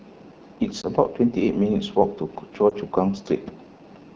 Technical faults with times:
0.00-4.15 AMR wideband (HD Voice) codec
0.81-0.86 lost AMR speech frames
2.70-2.74 lost AMR speech frames

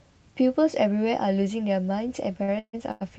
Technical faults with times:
2.43-3.03 repeated stalls (stutter)

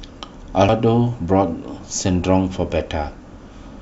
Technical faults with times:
0.69 damaged data in a compressed stream

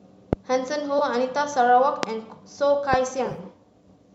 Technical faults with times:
0.33-0.35 loud pop
0.98-1.01 AAC frame loss with concealment
2.03-2.05 loud pop
2.93-2.96 loud pop
3.25-3.38 AAC frame loss with concealment

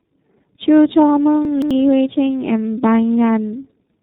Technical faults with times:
0.00-4.02 tandem speech coding
1.45-1.71 chunks out of order

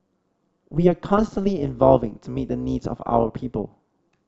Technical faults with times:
0.00-4.27 overlap-add ripple
0.95-1.31 DAB burbling
3.07 DAB burbling

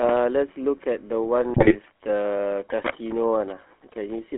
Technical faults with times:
0.00-4.38 GSM full-rate codec
1.38-4.38 time-stretched section
1.54-1.76 GSM bit errors

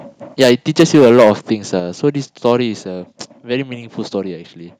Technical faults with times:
0.41-0.52 microphone overload
0.79-1.31 microphone overload
0.81 microphone volume stepped down
1.80 microphone volume stepped down
2.45-2.52 microphone overload

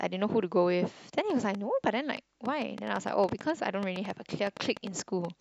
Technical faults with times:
1.18-5.26 train of clicks

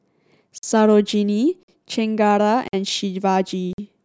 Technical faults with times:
0.58-0.63 gap between chunks
1.63-1.68 gap between chunks
2.68-2.73 gap between chunks
3.73-3.78 gap between chunks

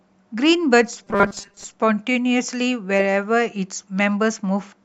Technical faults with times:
1.04-1.64 robotic sound from repeated short buffers

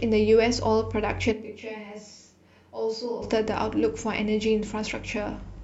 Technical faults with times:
1.34-3.21 switch to a distant microphone

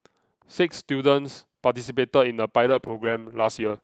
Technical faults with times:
0.85 overlapping chunks
1.86 overlapping chunks
2.66-3.83 call bitrate drop
2.88 overlapping chunks

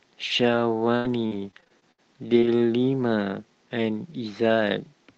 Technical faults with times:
0.95-2.00 repeated packet loss (robotic sound)
2.36-2.48 lost packet rebuilt from error correction
2.40-2.44 short concealed packet loss

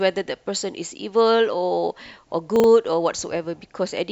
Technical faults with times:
2.56-2.64 chunks out of order

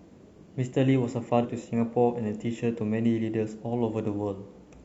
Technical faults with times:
1.40-1.46 damaged data in a compressed stream

